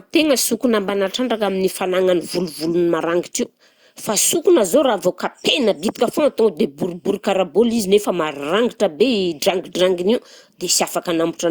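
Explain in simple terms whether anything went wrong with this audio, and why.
Nothing went wrong with this recording, as the speech signal holds up technically throughout with no audible problems anywhere in it.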